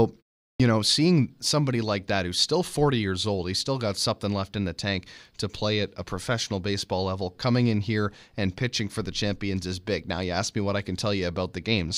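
Clipped start after a pause at 0.55 to 0.60 s: after a 0.41 s silence the output device has dozed off and needs a moment to wake, so about 48 ms of the onset is swallowed and "know seeing somebody like" bursts in abruptly, its first sounds missing.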